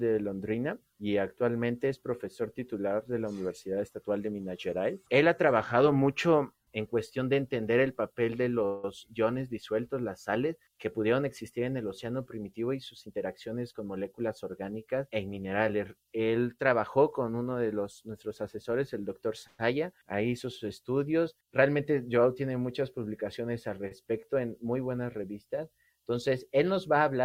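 From 8.65 to 8.85 s the sound hangs on as a fading buzz for 181 ms, then carries on from where it stopped with nothing lost. This is a call audio freeze, likely from delayed packets draining the jitter buffer. From 13.06 to 14.43 s the audio runs hurried, about 11% fast at unchanged pitch. This is a jitter buffer speed-up: the receiver trimmed roughly 0.15 s in small pitch-period cuts to shed excess buffered delay. From 19.47 to 19.60 s a second freeze holds the sound as a fading buzz for 120 ms, then it resumes intact. From 23.88 to 23.92 s one sound is briefly held too long, for 31 ms, with a slight buzz. This is a short stall from a late packet, stretched until the packet arrived.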